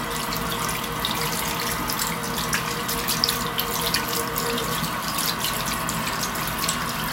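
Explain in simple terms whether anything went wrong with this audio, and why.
At 6.57 s the sound jumps ahead. This is likely a dropped buffer (overrun), where a tiny slice was lost before saving.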